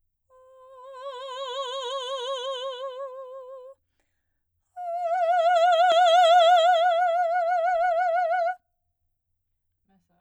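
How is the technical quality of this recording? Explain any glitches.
The recording has one clear glitch, a loud pop in the music at 5.92 to 5.94 s. A sudden voltage pulse, likely from a plug, switch, static discharge or driver glitch, entered the signal path and was shaped by the circuitry after it. The result is a single sharp pop, peaking a few decibels above the music, which carries on underneath without interruption.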